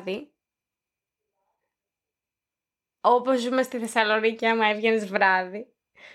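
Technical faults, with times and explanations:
No technical faults can be heard in the speech. There is nothing to list with a time or an explanation.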